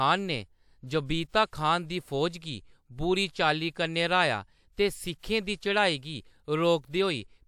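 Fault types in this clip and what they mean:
pre-echo: a short hiss creeps in about 49 ms before a sharp attack at 5.23 s, as block-wide codec quantisation noise spills ahead and softens the onset.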